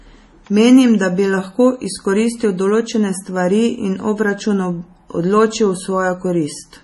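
From start to finish the speech carries heavy MP3 compression damage, likely from an encoder starved of bits. Nothing survives above 11.5 kHz, so the top end is sliced off flat and the sibilants lose their air. The swirly, watery texture comes from weak frequency lines dropping in and out between frames, and it sits on every phrase. That level of damage points to a very low bitrate, something around 32 kbps.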